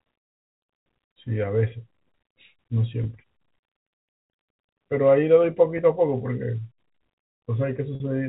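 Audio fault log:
3.04 s and 5.78 s: packet loss with pitch repetition. Each dropout lasts about 10 ms, which fits a single lost packet. The receiver bridges it by repeating the last pitch cycle, so the sound briefly holds with a slight buzz rather than breaking.
7.95 to 8.00 s: packet loss with pitch repetition. A longer 50 ms gap, likely several packets in a row. The repeated cycle fades out across it, leaving a held buzz that dies away before the speech cross-fades back in over the G.711 telephone band.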